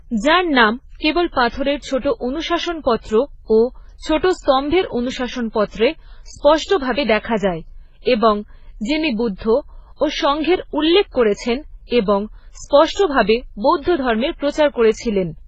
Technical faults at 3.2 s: transcoding between lossy codecs

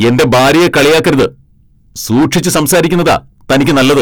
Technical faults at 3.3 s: hard clipping

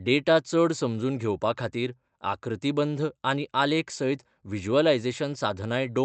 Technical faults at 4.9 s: none

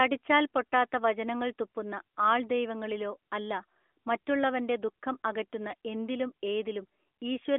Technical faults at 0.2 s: none

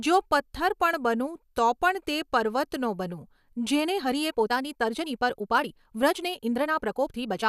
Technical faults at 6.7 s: time-stretched section

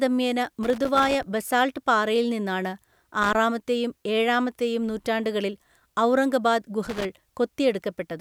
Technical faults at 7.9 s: none

